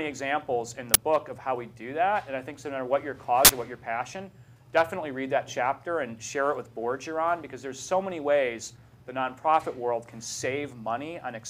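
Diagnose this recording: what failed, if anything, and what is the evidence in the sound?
At the driver or buffer stage, an uninitialised buffer reached the output twice, so leftover memory played as samples. There is a 12 ms crack at 0.94 s, fitting a 512-sample buffer, and a burst of digital noise from 3.45 to 3.50 s, fitting a 2048-sample buffer.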